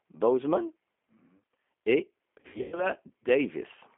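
The G.729 codec is heard from start to finish of this speech recording. The codec rebuilds each short frame from a vocal tract filter, a pitch predictor and a handful of pulses, and the steady roughness points to roughly 8 kbit/s. The line passes only about 250 Hz to 3.4 kHz, so the voice sounds thin. The codec damage is plainly audible: voicing has a grainy, slightly synthetic edge.

VoIP packet loss concealed by the speech codec runs from 2.40 to 2.87 s. Audio goes missing in bursts totalling about 220 ms, scattered across roughly 320 ms, with the longest gap near 100 ms. In each gap the decoder stretches its last pitch and filter settings while lowering the gain, so the sound turns into a buzzy tone or coloured noise and fades. Because every frame builds on the one before, the voice stays weak or smeared briefly after audio returns.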